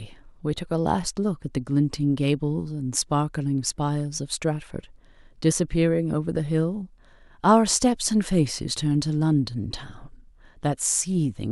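No technical faults can be heard anywhere in the signal.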